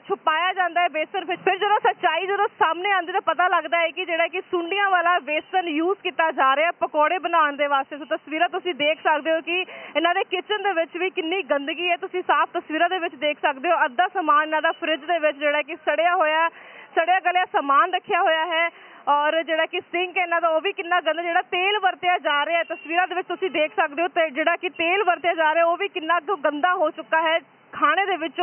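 No faults are audible anywhere in the recording.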